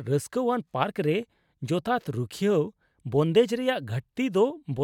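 Nothing to flag here: the speech runs from beginning to end without any technical fault turning up along the way.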